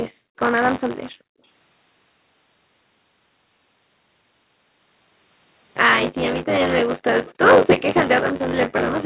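Buffer tearing runs through the whole clip: a rattling, robotic buzz at 93.8 Hz, which fits a 512-sample buffer. Writer and reader have slipped, so roughly a third of each period replays audio about 20 ms old. Unlike mains hum, it vanishes whenever the signal stops.

From 0.13 to 0.38 s and again from 1.12 to 1.42 s, the background is gated by the echo canceller, pushing room sound down by about 40 dB. This is not a network dropout: only the ambience sinks, then returns cleanly as the canceller releases.

From 6.37 to 6.44 s and from 7.26 to 7.34 s, short scraps of echo leak appear, likely because a far-end loudspeaker's canceller let residue through. Each is a distinct copy 322 ms late, about 20 and about 25 dB below the speech. That separation distinguishes it from a smooth reverberant tail.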